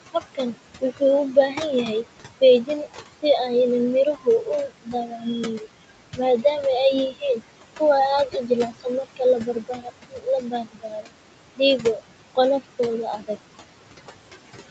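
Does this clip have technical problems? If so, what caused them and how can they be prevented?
Yes. Noise suppressor artifacts run throughout: the background is pulled down by about 21 dB in the gaps, leaving a residue that, unlike steady codec noise, pumps with the speech. A gentler suppression setting would prevent this.

Speech cut by the noise suppressor occurs from 0.13 to 1.88 s (dips of about 19 dB), 2.41 to 3.24 s (about 14 dB), 4.05 to 6.45 s (about 21 dB), and from 7.12 s to the end (about 22 dB). Soft speech was mistaken for noise and swallowed, unlike dropouts, which cut everything abruptly. Lowering suppression strength or improving the signal-to-noise ratio at the microphone would prevent it.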